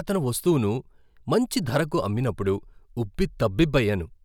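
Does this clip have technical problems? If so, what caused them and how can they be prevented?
No, there are no technical problems to be heard in this speech recording. With nothing having gone wrong, there is nothing to trace back or prevent here.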